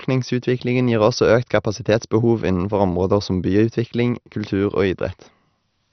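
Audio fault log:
throughout, MP2 compression: The speech is dull, with no content above about 6.1 kHz. A gurgling, granular roughness runs through it, and the upper detail flickers in and out. This is likely MPEG Layer II coding starved of bits, which fits a low rate around 48 kbps. The coder splits the sound into 32 sub-bands and shuts off the top ones when bits run short. The remaining bands are coarsely quantised, which adds heavy distortion.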